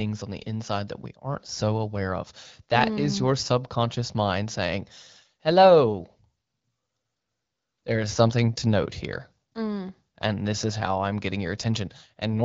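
No technical faults are audible.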